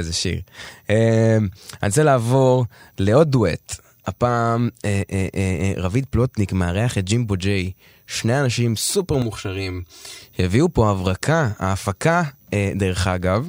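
From 9.22 to 10.22 s, channel delay (comb filtering): one channel lags by about 3 ms, so the mono sum hollows the speech with fixed notches from around 150 Hz, unlike a flanger's sweep.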